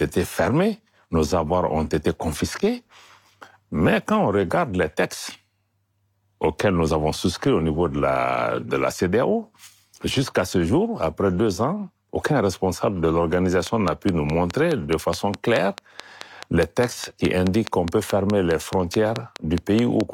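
Something near or inside the recording chain, most likely electrical interference from nearby equipment or a faulty connection or power supply, begins injecting short pulses into this speech clip, producing a train of clicks from 13.67 s to 20.02 s, just after "ans aucun responsable de". The clicks arrive at a steady 4.73 per second, around thirty of them, each much the same shape and peaking about 15 dB above the speech, so a regular ticking runs over the talking and through the pauses.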